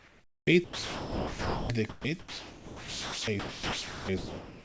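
From 0.00 to 0.47 s the real room background is likely replaced by comfort noise in place of the background. The sender appears to stop transmitting during the pause, and the receiver fills the gap with synthetic noise. That noise is a steady, featureless hiss about 5 dB quieter than the true background, which sits roughly 29 dB below the loudest passages. On a spectrogram this shows as an even, textureless wash with no small fluctuations. The waveform is a flat, uniform band of low-level fuzz.

Sound dropped by the voice detector follows in five stretches: 0.64–1.69 s, 1.89–2.04 s, 2.19–3.27 s, 3.39–4.08 s and 4.17–4.64 s. In each, the sender's detector likely judged the speech to be background and stopped sending, so the speech is cut off and smooth comfort noise plays until transmission resumes. About 1.0 s of speech is lost in the first gap and about 0.9 s in the third, with shorter losses elsewhere. 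The spectrogram shows harmonic speech bands, which end at 8 kHz on this call path, abruptly giving way to a flat noise floor. The waveform envelope collapses to a thin, even band at each gap.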